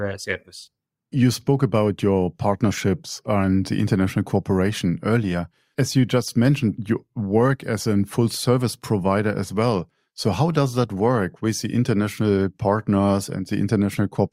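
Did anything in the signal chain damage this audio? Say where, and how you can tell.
No, nothing in the chain audibly damaged this speech recording; I hear no faults at any stage.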